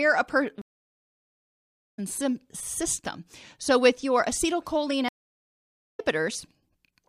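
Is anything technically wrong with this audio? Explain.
Yes. This speech clip has two stream reconnects. At 0.62 s the sound drops out for 1.36 s and resumes at 1.99 s roughly a second and a half further on. At 5.09 s a 0.9 s silence ends at 6.0 s with about 0.7 s skipped. Each time the connection broke, the player went quiet, reconnected to a live stream and started a new decoder wherever the stream had reached, so material is missing rather than delayed.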